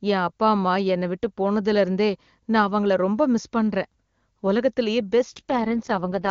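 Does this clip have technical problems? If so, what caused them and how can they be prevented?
Yes. From 5.29 s to 6.30 s there's an AMR rate drop: the band stays put and nothing cuts out, but the speech turns rough and synthetic, which fits the codec falling from HD Voice's 23.85 kbit/s to about 6.6 kbit/s. Better radio coverage prevents it.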